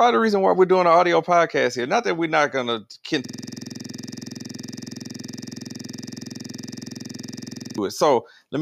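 At 3.25 s, right after "we're not going to", a system hang loop takes over until 7.78 s. The playback side froze while the audio hardware kept replaying one 46.44 ms slice, which fits a 2048-sample buffer, roughly a hundred times. At 21.5 repeats per second it comes across as a rough, rattling buzz. The waveform shows identical blocks tiling the whole span, and the spectrogram shows the same thin frozen slice repeating as evenly spaced vertical stripes.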